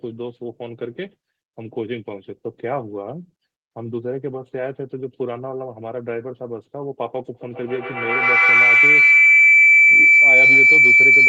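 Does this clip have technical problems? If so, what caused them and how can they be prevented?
Yes. From 7.34 s to the end of the clip there is a feedback howl: sound from a loudspeaker gets back into a microphone on the same call, and each pass around that loop comes back louder. The repeats narrow to a tone near 2 kHz that pulses roughly every tenth of a second and peaks about 13 dB above the speech. On a spectrogram it shows as a thin horizontal line near 2 kHz that grows brighter. On the waveform the envelope swells and pulses until it clearly tops the speech. Prevent it by muting or using headphones on any second device in the same room.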